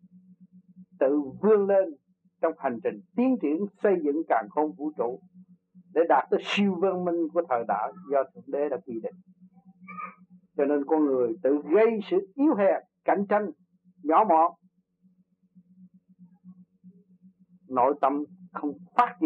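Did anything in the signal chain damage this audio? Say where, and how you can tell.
No, nothing along the signal chain has left an audible mark on this audio. There is no point where a stage from capture through to playback can be heard altering the sound.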